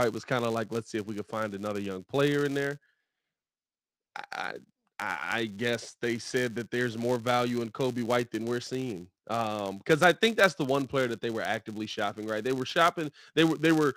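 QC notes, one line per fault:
Throughout: filter restarted on every block. The filter starts each block from silence, so a small transient opens every block, heard as a buzz near 188 Hz that rises and falls with the speech level, which fits a 256-sample block. A waveform shows evenly spaced spikes; a spectrogram shows harmonic lines at 188 Hz multiples.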